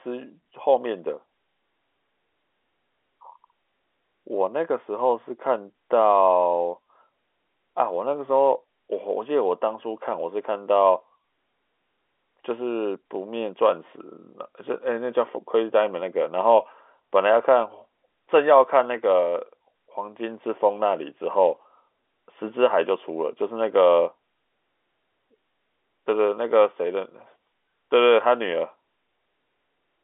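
No faults on the speech, which sits on a normal G.711 A-law telephone line with the usual 300 Hz to 3.5 kHz band and nothing above about 3.8 kHz.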